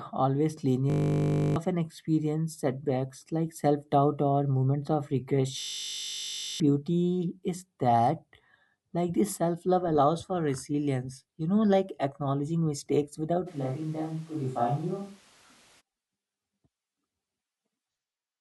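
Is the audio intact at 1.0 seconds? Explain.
No. At 1.0 seconds the speech is caught in a system hang loop running from 0.9 to 1.56 s. The machine or its audio driver stalled while the sound hardware kept replaying the same ring buffer. One 20 ms slice repeats 33 times. At that 50 Hz rate it fuses into a steady, flat buzz. About 0.7 seconds of real speech is lost. Normal audio returns with "experience setbacks like".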